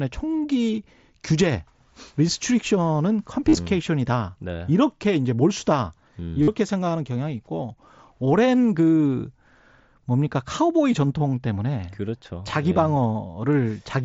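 Speech over a Bluetooth headset suffers concealed Bluetooth headset packet loss: dropped packets at 3.49 to 3.57 s and 6.42 to 6.48 s are patched with repeated recent waveform, giving brief buzzy held tones.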